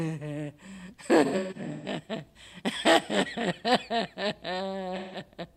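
From 1.25 to 1.87 s, the sound breaks up with AAC frame loss with concealment. Short gaps are scattered across about 600 ms, adding up to roughly 430 ms of missing audio. The longest run is around 150 ms. The decoder patches each gap from the last good spectrum, so the sound turns smeared, noisy and phasey. At 4.96 to 5.20 s, about 170 ms goes missing the same way, leaving another brief smeared patch.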